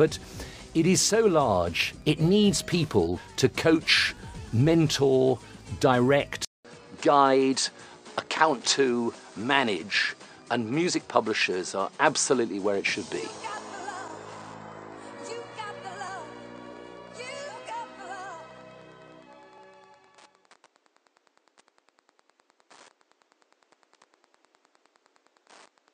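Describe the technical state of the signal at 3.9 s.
At 3.9 s you're hearing Wi-Fi interference, which runs through the whole clip. A nearby Wi-Fi radio's beacon, every 102.4 ms, gets rectified by the audio circuit, so there's a steady ticking about ten times a second, sitting roughly 35 dB under the signal.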